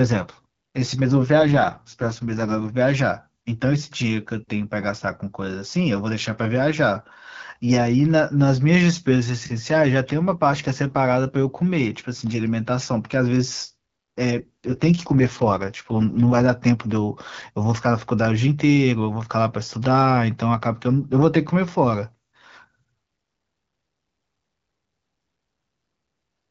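An AMR rate drop from 1.38 to 2.76 s and again from 14.38 to 16.46 s: the wideband speech codec falls to a lower rate and the speech turns rough and synthetic. This fits a fall from 12.65 to 6.6 kbit/s. The band stays intact with no gap, and the speech recovers afterwards.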